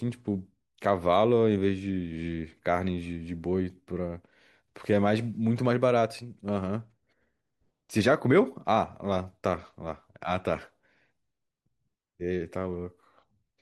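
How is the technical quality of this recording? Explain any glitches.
Nothing stood out as a technical problem on listening, so there are no glitches to explain.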